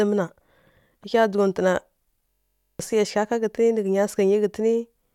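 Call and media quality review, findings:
System hang loop, 2.30–2.80 s: host or audio driver stalled while the output hardware kept replaying the same ring buffer, which fits a 1024-sample buffer. A 21.3 ms slice of speech repeats about 23 times, heard as a steady 46.9 Hz buzz; roughly half a second of audio lost.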